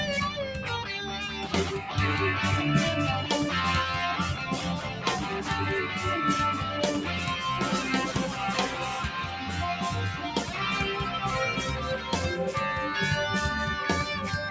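Throughout the clip, a noise suppressor built for speech is acting on sound it wasn't designed for. It mistakes steady tones and decaying tails for noise and pulls them down by around 5 dB. Onsets pass, sustains sink, and the level pumps and thins. The call path's band limit, with nothing above 8 kHz, can also be heard.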